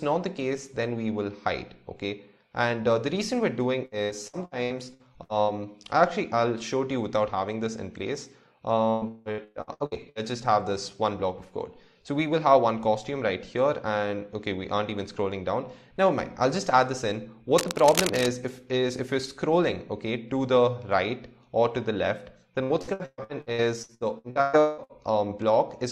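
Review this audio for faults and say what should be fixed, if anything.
Repeated packet loss (robotic sound) at 3.85–5.51 s, 8.90–10.18 s and 22.63–24.92 s: lost packets are patched by repeating prior audio, with holes up to 0.18 s, giving choppy, robotic sound.

Cable scratch noise at 17.58–18.26 s: dense, uneven crackling nearly as loud as the signal, likely from a worn cable or connector being moved.

Use a larger jitter buffer or a more reliable network link, and replace or secure the faulty cable.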